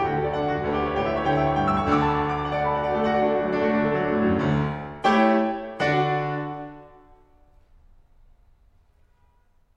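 No technical faults can be heard anywhere in this music recording, and the signal holds steady throughout without any break or disturbance.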